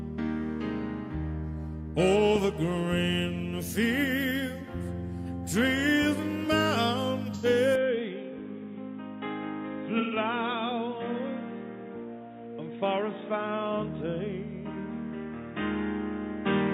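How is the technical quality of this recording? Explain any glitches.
The recording has two kinds of trouble: a couple of brief dropouts and a drop in quality partway through.

AAC frame loss with concealment shows up at 7.34 to 7.45 s and again at 9.99 to 10.16 s. The first gap is about 85 ms, which fits two lost frames, and the second is 128 ms, about three. The decoder patched each gap from the last good spectrum, so you hear a short smeared, noisy, phasey blur rather than silence.

From 7.76 s to the end the sound turns duller and boxier, with nothing above 3.8 kHz, a level drop of around 5 dB and a new noise floor roughly 30 dB down. There's no gap at the changeover. The likely cause is the input switched to a poorer device, one with a narrower band and its own hiss.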